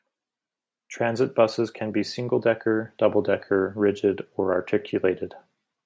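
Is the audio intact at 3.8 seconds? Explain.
Yes, at 3.8 s the speech is intact, carried through the call microphone processing, whose trimming of the lowest bass is normal rather than a fault.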